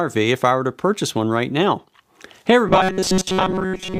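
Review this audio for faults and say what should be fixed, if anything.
From 2.67 s to the end, robotic sound from repeated short buffers. It is a fixed 188 Hz metallic buzz, likely from audio arriving too seldom. About 5.3 ms chunks loop for most of the stretch, visible as flat, evenly spaced harmonic stripes on a spectrogram and identical repeating cycles in the waveform. Prevent it by enlarging the jitter buffer or fixing upstream delivery so audio arrives on time.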